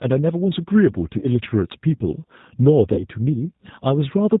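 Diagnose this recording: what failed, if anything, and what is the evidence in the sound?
G.729 codec, throughout the 4.4 s of speech, at the codec stage. The 8 kbit/s coding is plainly audible: the speech is rebuilt from a vocal tract filter, a pitch predictor and a few pulses per frame, so it sounds rough and synthetic, and nothing above 4 kHz passes.

VoIP packet loss concealed by the speech codec, at the network stage, at 1.19 to 1.26 s and 2.94 to 3.05 s. Each gap, about 30 ms, points to one lost packet. The decoder repeated its last pitch and filter at falling gain, smearing the speech into a fading buzzy tone or coloured noise, and needed further frames to recover afterwards.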